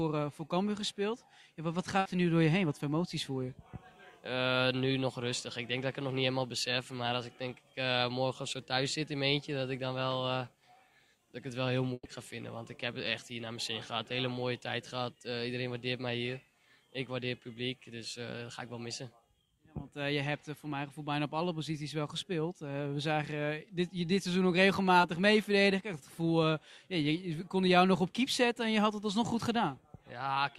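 Burst of packet loss at 1.99–2.07 s and 11.93–12.07 s: consecutive packets arrived too late or not at all. The receiver stretched and faded the last sound, for 60 ms and then 120 ms, the second fading to 30 ms of silence, before resuming with audio skipped.

Short concealed packet loss at 25.01–25.05 s: a 20 ms gap before decoding was patched by extending the preceding sound and crossfading back. It is heard as a brief smear or wobble.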